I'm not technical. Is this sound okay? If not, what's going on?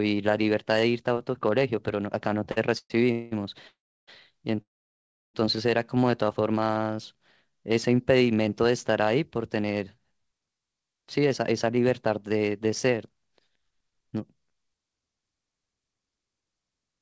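No. The speech has several clear hiccups, all typical of audio sent over a call connection.

At about 2.52 s one sound is held a little too long, for roughly 46 milliseconds, with a faint buzz or dip. This is a short stall from a late packet. A piece of audio arrived late, so the receiver stretched the last sound until it showed up, and nothing was lost.

Just after that come four call audio freezes, each longer than the last. They run from 2.78 to 2.92 s, 3.12 to 3.33 s, 3.67 to 4.09 s and 4.61 to 5.36 s. The sound stalls into a fading buzz or hiss, and the last two drop into silence for about a third of a second and then about two-thirds of a second. The likely cause is network hold-ups: the audio ran out, then resumed exactly where it stopped.

From 6.60 to 7.14 s the speech drags, playing at about 88% speed with the pitch unchanged. This is a jitter buffer slow-down. The receiver repeated tiny slices of sound, about 74 milliseconds in total, to build up a safety reserve.

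From 9.15 to 9.71 s and again from 11.30 to 11.86 s the speech sounds slightly hurried, running at about 108% and 109% speed. These are jitter buffer speed-ups. The receiver had too much audio waiting, so it trimmed out tiny bits, roughly a twentieth of a second each time, to catch up.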